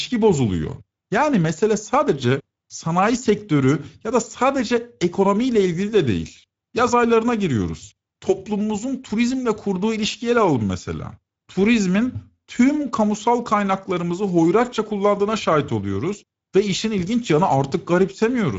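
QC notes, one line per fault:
Throughout, Speex codec. The speech sounds plainly hoarse and grainy, because the CELP coder has too few bits to rebuild the excitation cleanly. Nothing remains above 7.7 kHz. The damage points to a wideband mode at a modest bitrate, near 17 kbps.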